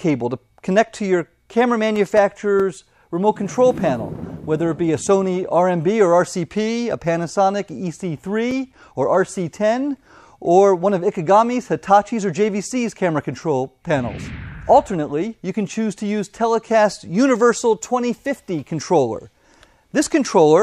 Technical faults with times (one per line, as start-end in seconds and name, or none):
1.96-3.23 CD scratch ticks
8.09-9.36 CD scratch ticks